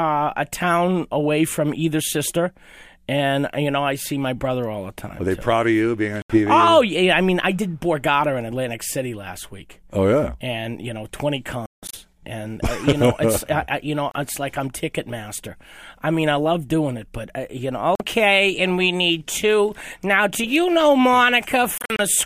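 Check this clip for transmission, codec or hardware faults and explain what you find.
The speech cuts to silence five times, at 6.22 to 6.38 s, 11.66 to 11.95 s (broken gaps, longest 168 ms), 14.11 to 14.18 s, 17.95 to 18.03 s and 21.78 to 22.00 s (scattered short gaps), then resumes further on as if it had kept playing. This is likely a Bluetooth dropout, where late packets are discarded before reaching the headphones.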